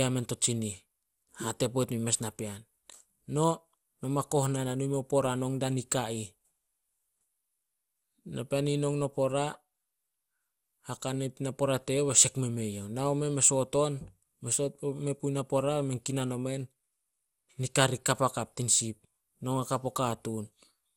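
Throughout the speech, repeated MP2 decoding and re-encoding, likely about five passes at around 96 kbit/s, causes generation loss. Each pass requantises on a shifted frame grid, stacking noise. Nothing remains above 17.4 kHz, attacks blur, and the sound turns swirly and hollow.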